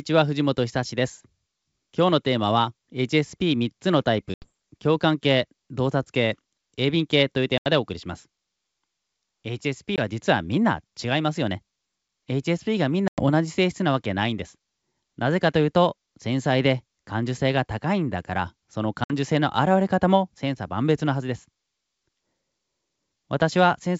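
Speech with packet loss on an ADPCM call: silent gaps of 80, 80, 20, 100 and 60 ms at 4.34, 7.58, 9.96, 13.08 and 19.04 s leave hard-edged blank columns on a spectrogram and flat lines in the waveform. Each returns with a brief level or distortion glitch while the decoder's predictor and step size resynchronise.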